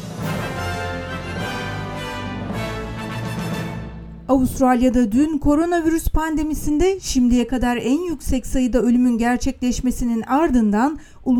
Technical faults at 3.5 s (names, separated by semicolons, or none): none